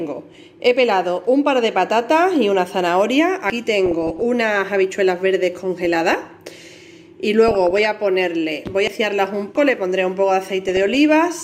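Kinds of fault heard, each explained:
Dropped buffer (overrun): The sound suddenly jumps ahead at 0.34, 3.50, 8.88 and 9.56 s. It's most likely the samples weren't read before the hardware overwrote them. Two skips lose roughly a tenth of a second, the 9.56 s one about 0.15 s, the 8.88 s one nearer a third.
DAB burbling: Short blips of noise in single sub-bands, from wrong samples in the audio data. Weak reception lets bit errors slip past the error correction into the MP2 data. You get it at 3.86–4.22, 5.85–6.51, 7.48–7.87 and 10.61–10.95 s, with error rates well under one percent.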